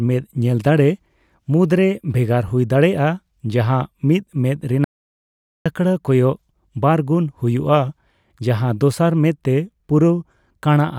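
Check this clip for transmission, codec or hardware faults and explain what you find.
One fault is present: an audio dropout to silence. From 4.84 to 5.66 s the speech cuts off abruptly for about 0.81 s. The gap is complete silence, with no room tone. The input was likely lost while recording kept writing zeros. That stretch is gone.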